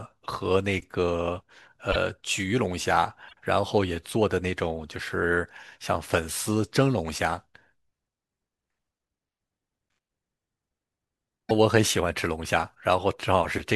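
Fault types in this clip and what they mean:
Broken MP3 bit reservoir: at 1.91–1.96 s, 3.28–3.33 s and 11.49–11.51 s the speech jumps ahead with a short glitch lasting about 28 to 54 ms, with 24 ms frames, likely because frames were lost and the next ones fetched their borrowed reservoir bits from the wrong data.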